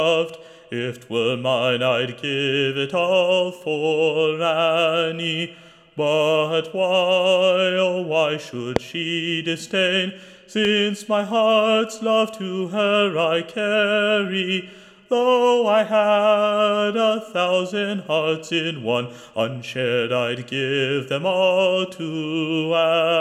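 Two loud pops sit on top of the audio, a sharp one at 8.76 s that jumps well clear of the sound and a milder one at 10.65 s. Each is a single brief click, most likely a voltage spike from a plug, switch or static.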